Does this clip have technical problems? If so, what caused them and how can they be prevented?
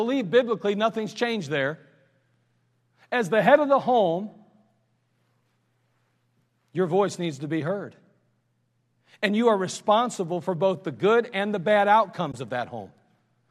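Yes. Faint ticks recur roughly every half second from 0.17 s to 13.32 s, about thirty in all. These are clock slip clicks, likely from two unsynchronised devices dropping or repeating one sample as their clocks drift apart by around 50 ppm. Their even spacing, and their absence in silent gaps, sets them apart from random digital clicks. Locking both devices to one clock, or resampling asynchronously, prevents them.

At 12.32 s the sound fades out and back in over about 20 ms, leaving a soft-edged hole. This is AAC frame loss with muting, and the length fits two lost 10 ms frames that the decoder silenced. A hard dropout would click instead of fading. Forward error correction or packet loss concealment prevents it.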